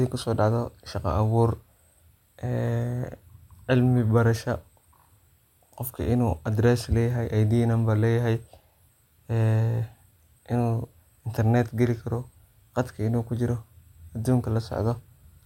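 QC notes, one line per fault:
Nothing stood out on listening to this speech recording.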